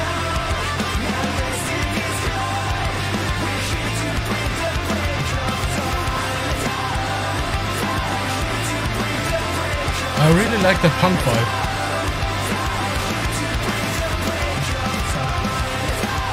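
Periodic USB or driver dropouts: from 0.19 s to 16.12 s, a couple of milliseconds of sound is skipped every 0.498 s, giving steady ticks, about thirty.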